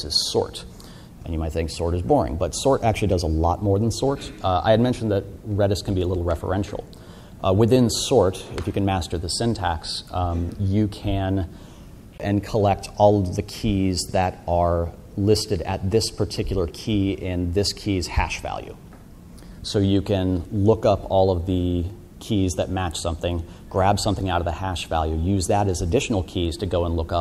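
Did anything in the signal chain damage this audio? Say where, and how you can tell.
Yes. A CD skip at 12.18 s damaged the audio at playback. There is a very short mute, about 20 ms. The sound then resumes from a different point. The laser lost its track and jumped to another turn of the spiral.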